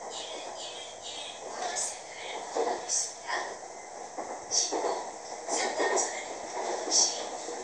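At 0.45, 2.79, 3.61, 5.25 and 6.25 s the sound jumps ahead a hair, with no gap at all. That's a dropped buffer (overrun), likely: samples got overwritten before being read, so a sliver of roughly 10 ms vanishes and the edges butt together.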